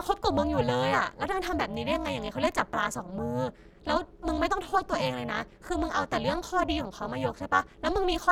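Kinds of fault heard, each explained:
Overlap-add ripple: harsh robotic buzz throughout the speech, level dipping about 60 dB roughly 400 times a second, as reassembled frames' overlap fails to sum to constant gain.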